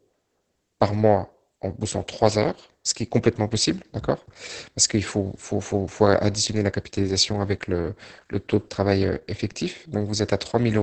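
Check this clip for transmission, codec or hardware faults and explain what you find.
One codec fault runs through the whole recording: Opus voice compression, with heavy damage.

It is present from start to end. Nothing above about 8.7 kHz survives, which points to Opus in wideband SILK mode. The linear-prediction coder models the speech spectrum and quantises the excitation very coarsely, consistent with a rate around 10 kbps. The speech sounds muffled, with a hoarse, buzzy texture and a slightly robotic quality where the fine excitation detail has been lost.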